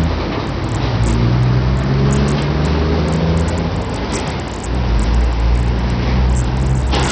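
An everyday-sound recording, likely passed through Bluetooth SBC compression with a starved bit pool throughout, which fits a bitrate near 64 kbps. Nothing survives above 16.7 kHz, the upper treble flickers in and out, and a gritty, aliased roughness rides heavily on the sound.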